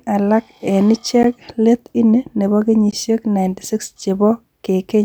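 Speech, interrupted twice by a block of digital silence. The first comes at 1.23 s and lasts about 11.6 ms. The second comes at 2.91 s and lasts about 15.3 ms. At each one the signal drops straight to silence and returns with no fade. The first gap, under 15 ms, is short enough to land as a tick rather than as silence. The first gap's length fits a 512-sample buffer. The likely cause is an output buffer that was not filled in time.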